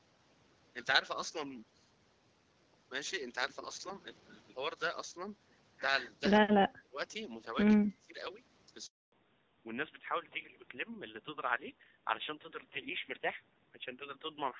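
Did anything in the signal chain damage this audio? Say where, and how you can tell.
Yes. Around 6.81 to 6.98 s and again from 7.85 to 8.2 s, the voice sags by about 20 dB, for roughly 150 ms and then about 300 ms. That pattern is most likely speech suppressed in double talk, coming from the call processing stage. When the echo canceller can't tell the near talker apart from loudspeaker echo, it plays safe and pulls down everything, including the wanted speech.

Then there's a handover gap at the network stage, running from 8.86 to 9.12 s. The audio falls away fast and sits in dead silence for 260 ms before it comes back. That's what you get when the phone hops from one network to another and no speech frames arrive until the new link is up. Whatever was said in that window is simply gone. You can't recover it downstream.

Right after the gap, from 9.12 s to the end, you get a fallback to narrowband at the codec stage. 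Before that the speech has content up to about 7 kHz with that slightly noisy HD Voice top, but afterwards nothing sits above 4 kHz, and it turns duller and rougher. That fits the call dropping from AMR-WB at 12.65 kbit/s to AMR-NB at 7.4 kbit/s when the new link came up.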